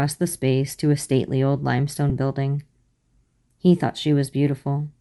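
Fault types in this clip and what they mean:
Bluetooth LC3 compression: Speech carries a plainly audible breathy, grainy edge throughout. This is likely LC3, the LE Audio transform codec, at a modest bitrate. It coarsens the upper spectrum and patches gaps with noise. It runs with 7.5 ms frames.
Lost LE Audio frames: A brief dropout comes at 2.10 s, just after "to a stately old". It lasts about 7.5 ms, which fits one lost frame. The decoder repeated the previous spectrum with random signs, so the sound blurs briefly.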